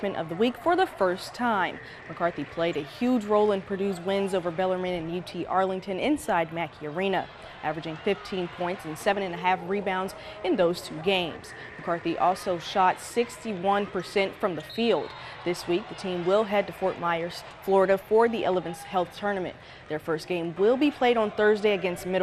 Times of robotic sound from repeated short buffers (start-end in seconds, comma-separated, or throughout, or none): none